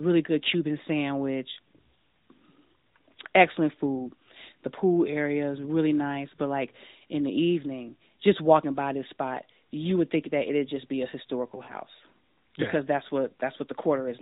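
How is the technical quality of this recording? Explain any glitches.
The recording has one glitch, lost AMR speech frames, from 11.64 to 11.74 s. The narrowband AMR-NB coding is audible throughout as a lack of anything above 4 kHz, with only light coding damage, consistent with its highest 12.2 kbps mode.

At 11.64 s the decoder receives frames that fail their checks. It fills the gap by repeating the last good pitch and spectral shape at falling gain. About 40 ms is concealed, which fits two 20 ms frames. The result is a short, slightly stretched, fading warble, and at 11.74 s the voice comes back weak or rough for a moment.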